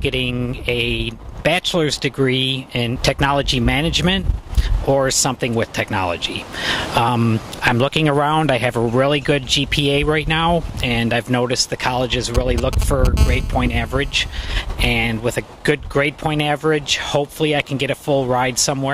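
A galloping dit-dit-dit of short raspy buzzes, nearly as loud as the audio itself, runs from 12.35 to 13.07 s: GSM signalling bursts from a nearby 2G phone, rectified by the audio circuit. From 13.17 to 14.41 s a steady, harsh 217 Hz buzz rich in harmonics sits about 18 dB below the audio, a GSM phone buzz from that phone transmitting in bursts 217 times a second during a call.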